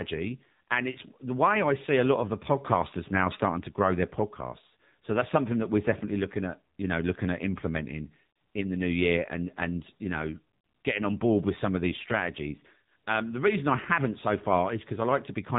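From start to finish the speech has gone through the AMR narrowband mobile codec, the old 2G/3G phone coder. Nothing gets past about 3.8 kHz, so everything sounds boxed-in and telephone-thin, with the crisp top of consonants simply gone. The coder rebuilds the voice from a vocal-tract model fed by sparse pulses, and the damage is plainly audible: a buzzy, synthetic edge that fits one of the lower modes, around 7.4 kbps.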